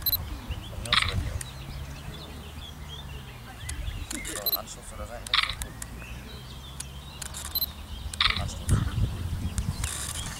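No technical faults can be heard anywhere in this audio.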